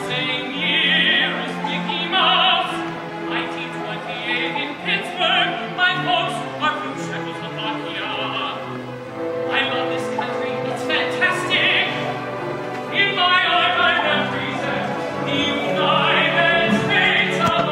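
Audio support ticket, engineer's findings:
Nothing stood out on listening, and there are no findings to raise against this clip.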